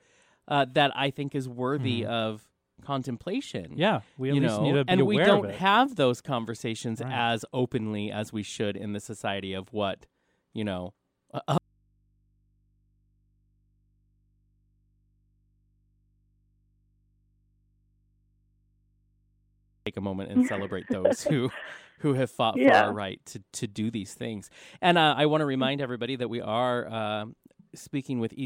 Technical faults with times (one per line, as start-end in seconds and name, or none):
11.58-19.87 audio dropout to a faint residue